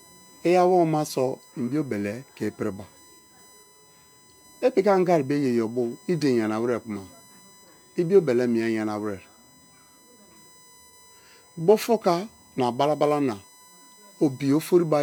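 A USB whine runs under the speech for the whole clip. It is a fixed-pitch tone based at 1 kHz, loudest at its 8 kHz multiple, about 30 dB below the speech. Current drawn in USB bus frames leaks through power or ground into the audio.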